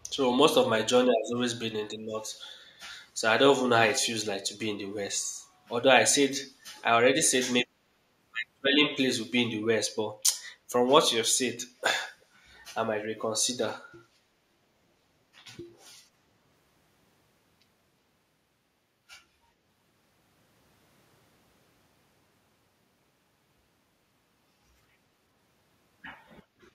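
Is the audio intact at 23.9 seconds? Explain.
Yes, the speech at 23.9 seconds is intact, with no dropout, click, distortion or other fault at that moment.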